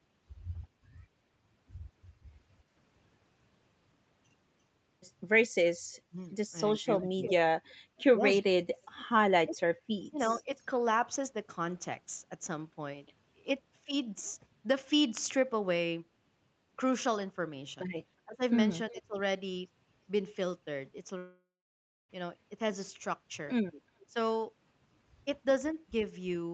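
From 5.92 to 10.49 s the speech is repeatedly pulled down in level, for roughly one and a half seconds in total and by as much as about 35 dB at the deepest dips. This is speech suppressed in double talk, likely because the echo canceller could not separate the local talker from loudspeaker echo while both sides spoke and attenuated everything. On a waveform the envelope collapses in uneven bites. On a spectrogram the harmonics thin out or vanish in patches.

Inside that stretch, from 7.23 to 7.74 s, an echo leak appears. A delayed copy of the speech, lagging about 349 ms and only about 10 dB below the direct sound, comes back through the call. The likely cause is loudspeaker pickup that the canceller failed to remove. On a spectrogram it shows as a fainter duplicate of the harmonic pattern, shifted right by about a third of a second. A much weaker scrap, about 35 dB down with a 354 ms delay, follows at 10.6 s.

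From 18.25 to 19.17 s the speech is suppressed again, for about 0.4 s in total and by up to about 25 dB.

At 21.17 s a long network dropout begins. For roughly 0.9 s no audio arrives. The receiver likely extended the last sound as a fading buzzy tail, and then about 0.64 s of near silence follows. Speech resumes at 22.11 s with that section missing. The spectrogram shows a smeared, decaying band followed by an empty gap.

At 23.99 s a faint echo leak returns, about 35 dB down with a 378 ms lag. It is followed at 24.06 s by a brief 0.1 s dip of about 20 dB. Throughout the clip, the content stops near 8 kHz, as expected for the call path.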